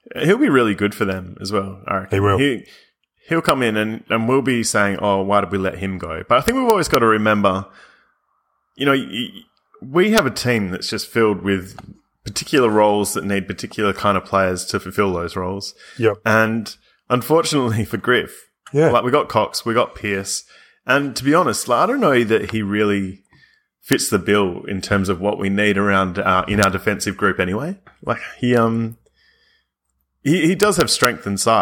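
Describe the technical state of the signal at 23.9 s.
At 23.93 s there is an integer overflow: a speech peak exceeded the largest integer value and wrapped to the opposite sign instead of limiting, producing a sharp crack.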